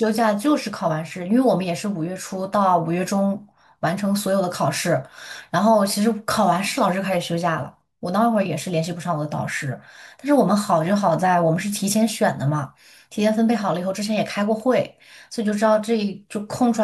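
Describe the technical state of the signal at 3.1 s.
At 3.1 s the speech signal is intact, with no fault present at that moment.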